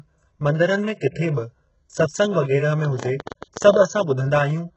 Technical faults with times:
0.00-4.76 HE-AAC compression
2.85-3.83 train of clicks

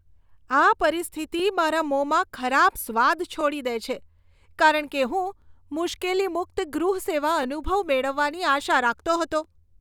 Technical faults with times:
1.40 overlapping chunks
3.41 overlapping chunks
5.42 overlapping chunks
7.43 overlapping chunks
9.44 overlapping chunks

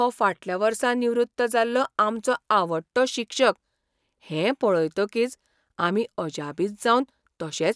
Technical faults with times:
none

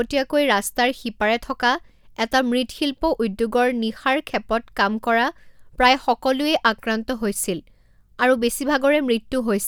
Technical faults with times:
none

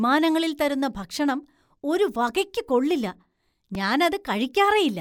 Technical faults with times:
3.75 repeated buffer

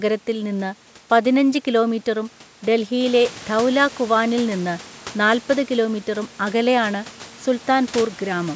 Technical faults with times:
none

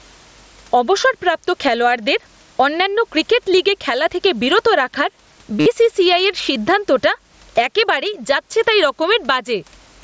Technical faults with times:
0.00-10.04 gain pumping
5.60-5.66 concealed Bluetooth headset packet loss

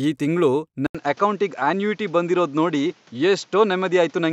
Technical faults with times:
0.87-4.33 input switched to a poorer device

